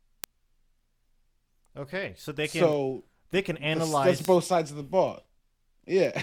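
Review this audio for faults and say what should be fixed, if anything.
Sharp, uneven ticks about every 0.15 s from 0.24 to 6.19 s are word clock ticks. An unlocked receiver slips one sample per clock crossing, which suggests roughly 150 ppm of clock mismatch. Lock the receiving device to the sender's word clock, or put sample-rate conversion on the digital input.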